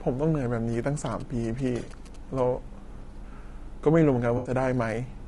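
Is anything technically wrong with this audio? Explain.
Yes, three technical faults can be heard in this speech clip.

Low-delay AAC compression runs throughout. The cause is likely the AAC-ELD codec used for video calls. Its short frames capture pitch harmonics poorly and need more bits, so at a modest rate the encoder runs short. The voice is plainly rough and grainy, with noise filling the gaps between harmonics and a thin, synthetic-sounding top band. That degree of damage fits a bitrate around 32 kbps.

GSM signalling bursts occur from 0.73 to 2.40 s. A nearby 2G phone transmitting short groups of radio bursts, as it does while signalling to the network, is picked up and rectified by the audio circuitry. The result is a galloping dit-dit-dit of short buzzes at about 217 Hz, the burst repetition rate. It sits roughly 20 dB below the speech.

AAC frame loss with concealment occurs between 4.37 and 4.51 s. 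About 80 ms of coded audio went missing, which points to roughly four lost frames. The decoder filled the gap by reusing and reshaping the last good spectrum. That patch of speech comes out smeared and noisy, with a phasey quality, rather than dropping into silence.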